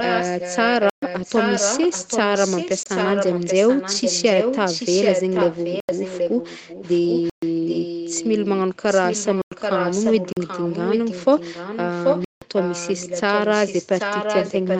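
From the start to 8.52 s, and again from 8.9 s to the end, a second copy of the speech trails the first by about 785 ms. It is about 5 dB quieter than the original, so the two overlap into a smeared doubling. This is an echo leak. The likely cause is a far end playing the call on a loudspeaker, where the echo canceller failed to strip that sound from its microphone and sent it back down the line.

Across the clip, the audio also drops abruptly into dead digital silence and snaps back. These blocks of digital silence fall at 0.90–1.02 s (128 ms), 2.83–2.86 s (26.5 ms), 5.80–5.89 s (85 ms), 7.30–7.42 s (128 ms), 9.42–9.52 s (98 ms), 10.33–10.37 s (43 ms) and 12.25–12.42 s (171 ms). Each is heard as a short hole, the longer ones as distinct holes. The output buffer probably wasn't filled in time, so zeros were played instead. Several lengths fit power-of-two block sizes at 48 kHz, such as 2048, 4096 and 8192 samples. 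The audio band stops at 8 kHz, as expected from the call's Opus path.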